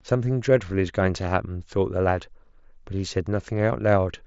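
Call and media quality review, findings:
No faults found: the speech carries content up to about 7.7 kHz with nothing above, with a light graininess on louder passages, which points to a wideband Bluetooth headset link on the mSBC codec working as intended.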